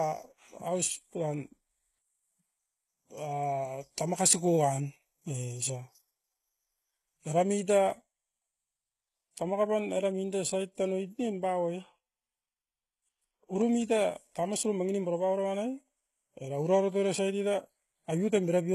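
Throughout, the treble sounds synthetic and gritty, with s sounds turning metallic and nothing above 15.3 kHz, likely HE-AAC compression whose band replication suggests roughly 16 kbps.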